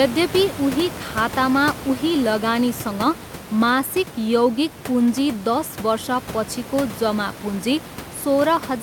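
Nothing stood out on listening to this speech recording, with only the room's own background noise sitting about 12 dB below the speech.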